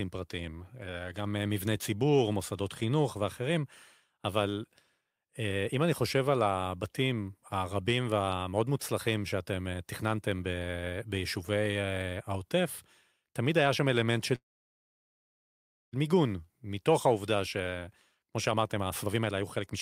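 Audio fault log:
14.35–15.95 s, call audio freeze: the sound stalls for about 1.6 s, mostly silence after a brief fading tail, then resumes where it left off, likely from delayed packets draining the jitter buffer.
17.59–19.75 s, jitter buffer speed-up: speech runs about 121% fast at unchanged pitch, sounding hurried, as the receiver trims short pitch-period slices, around half a second in all, to shrink the buffered delay.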